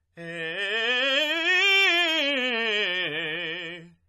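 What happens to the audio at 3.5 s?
At 3.5 s the music sounds dull and smeared, with nothing above 12.5 kHz; this runs through the whole clip and is likely AAC compression at roughly 32 kbps.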